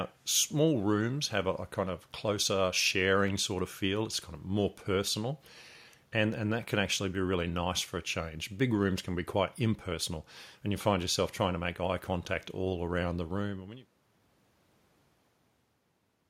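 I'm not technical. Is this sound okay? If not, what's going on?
Yes, this speech sounds fine, and the gentle fade-out you hear from around 13 seconds until 13.96 seconds is just a deliberate smooth fade at the end.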